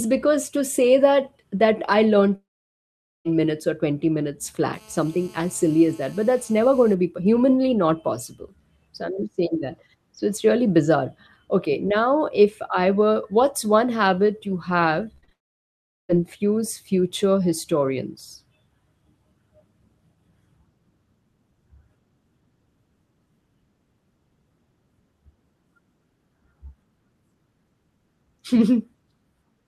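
From 2.35 to 3.27 s the speech stops for nearly a second. A brief smeared continuation of the last sound fades almost at once, leaving about 0.8 s of silence, and the speech resumes further on with roughly 0.9 s simply gone. This is a long network dropout, most likely a stretch where no audio packets reached the receiver. It differs from a momentary glitch because the concealment gives up quickly and the lost material is never recovered.

Between 4.74 and 6.94 s a hard, raspy buzz at 217 Hz sits under the speech at about 29 dB below the signal. It is rich in harmonics and stays nearly steady across the span. This is GSM phone buzz: a nearby 2G handset on a call transmits in bursts 217 times a second, and the audio circuitry rectifies those radio pulses. Mains hum is smoother and sits at 50 or 60 Hz. This buzz is coarser, has a fixed 217 Hz rate, and has no relation to the speech.

At 15.15 to 15.33 s the sound turns choppy. 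Four short holes, the longest 38 ms, are each patched by stretching the previous sound, so over half of that span is concealment rather than real audio. This is repeated packet loss with a robotic sound. The losses are frequent and brief, unlike a single long gap.

It runs straight into a second long network dropout from 15.33 to 16.14 s, where the cause is again likely a break in packet arrival. Here about 0.75 s is silence and roughly 0.76 s of speech is lost before the audio returns.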